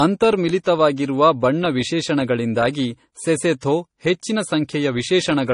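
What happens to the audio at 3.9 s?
At 3.9 s you're hearing the same thing that runs through the whole clip: the speech sounds like it's been squeezed through lossy coding more than once. Nothing survives above about 10.6 kHz, and the second codec's own artefacts sit on top of the first one's, so they blur together. That's most likely transcoding between lossy codecs, and the sound fits a low-rate MP3 around 40 kbit/s re-encoded to AAC-LC around 32 kbit/s.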